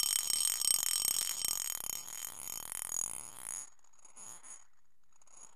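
From 1.13 to 1.38 s the processor falls behind and cannot finish its audio buffers on time, missing around fifteen deadlines in quick succession. The short buffer length this implies, a few milliseconds each, fits the dense texture heard. Each miss is filled by replaying a scrap of old audio with abrupt edges, so the sound picks up a gritty burst of processor overload crackle, a tearing layer that stops once the load clears.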